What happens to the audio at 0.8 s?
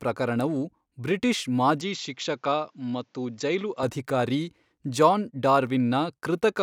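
Nothing goes wrong at 0.8 s; the speech carries on intact through that moment.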